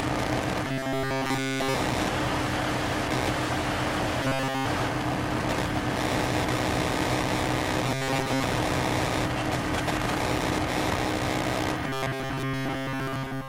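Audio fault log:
0.65–1.74 s, 4.23–4.66 s, 7.86–8.45 s, 11.87–13.48 s: robotic sound from repeated short buffers. Late audio was likely patched by looping a 7.5 ms slice, imposing a metallic 134 Hz buzz, complete in the first two spans and partial in the last two.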